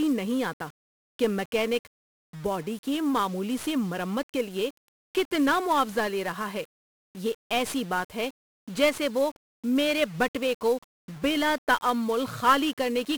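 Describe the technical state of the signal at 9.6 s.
1-bit DFPWM compression is present at 9.6 s, as it is across the whole speech clip. Each sample is reduced to a single up-or-down bit that nudges an adaptive level toward the waveform, so the signal is only ever tracked by small, self-adjusting steps. The quantisation noise is heavy and broadband: the speech sounds fuzzy and crackly, with its upper frequencies buried under hiss. This degree of damage fits a data rate of around 48 kbps.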